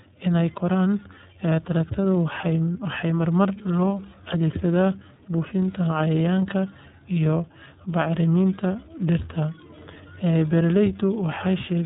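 Throughout the speech, the iLBC codec has coded each frame's excitation independently, at a rate and frame length that fit its 13.33 kbps mode with 30 ms frames. Everything above about 3.8 kHz is missing, and the plainly audible coding leaves the speech rough and slightly synthetic.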